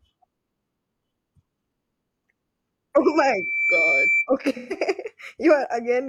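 At 3.03 s a loudspeaker feedback squeal begins. A microphone is picking up the loudspeaker it feeds, and at 2.3 kHz the loop gain passes one. The tone swells over roughly 0.7 s until it is about as loud as the speech. It holds as a piercing whistle and stops at 4.28 s.

From 4.57 to 4.77 s there is AAC frame loss with concealment. About 128 ms of coded audio is missing, which fits a run of three lost frames. The decoder fills the gap from the last good spectrum, so the sound turns briefly smeared and noisy.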